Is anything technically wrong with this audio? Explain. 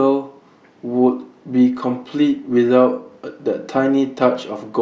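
No, nothing technically wrong can be heard anywhere in this speech recording.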